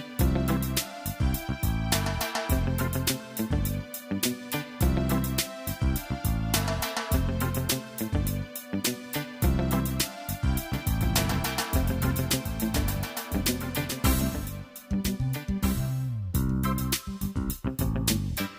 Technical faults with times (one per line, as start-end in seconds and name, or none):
10.73-17.49 doubled audio track